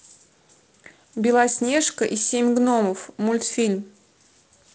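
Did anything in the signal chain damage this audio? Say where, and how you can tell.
No, nothing in the chain damaged this speech; the only processing audible is the G.722 wideband coding at 48 kbit/s, which caps the band near 7 kHz and leaves a light hiss that fits a codec running at its lowest rate.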